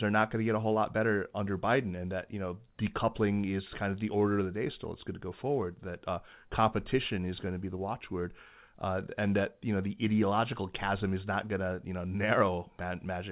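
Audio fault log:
No faults heard anywhere in this speech recording.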